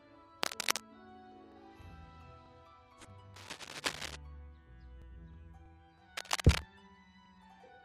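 Cable scratch noise appears at 0.43 to 0.85 s, 3.34 to 4.16 s and 6.17 to 6.61 s: dense, ragged scratching laid over the sound, a little louder than it in the first and last bursts and about level with it in the middle one, likely from a worn connector shifting its contact resistance.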